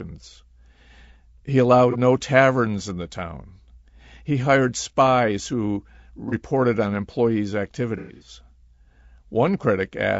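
The whole recording has likely passed through low-delay AAC compression, the AAC-ELD mode used in video calls, at a rate that sounds like around 32 kbps. At that low bitrate the coder has too few bits to code the spectrum finely, so the damage is plainly audible: the speech sounds rough and grainy, with noise filling the gaps between harmonics and an upper band that sounds thin and synthetic.

AAC frame loss with concealment appears three times. Each time, coded frames failed to arrive, and the decoder rebuilt the missing audio from the last good spectrum. At 1.91 to 1.96 s and again at 6.29 to 6.34 s, about 30 ms goes missing, which sounds like a brief smeared, phasey blur. The worst stretch runs from 7.97 to 8.29 s. There, about 180 ms is lost in bursts spread over roughly a quarter of a second, the longest about a tenth of a second. The sound turns noisy and smeared.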